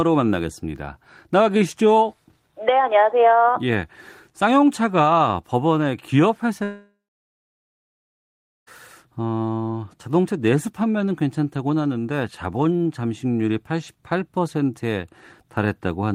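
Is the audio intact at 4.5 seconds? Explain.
Yes, the speech at 4.5 seconds comes through intact, with no dropout, click, distortion or other fault at that moment.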